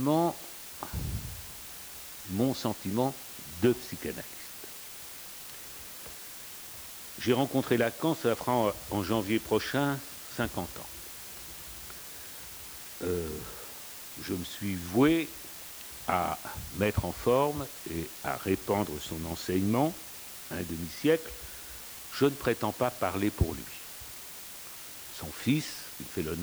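From start to finish the audio shows low bit depth with dither: it was reduced to 6 bits, with dither added before rounding. The quantisation error therefore turns into a constant, even hiss, sitting roughly 15 dB below the signal, rather than audible distortion.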